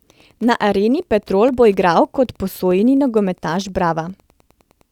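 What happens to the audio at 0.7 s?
Wi-Fi interference runs through the whole clip: a nearby radio's 102.4 ms beacon is rectified into a faint steady tick, roughly ten per second, at about 40 dB below the signal. At 0.7 s the sound also sits inside a run of clock drift buffer slips between 0.25 and 3.95 s, heard as a regular click every 1.23 s. The likely cause is two clocks differing by roughly 150 ppm, so a handful of samples is dropped or repeated each time.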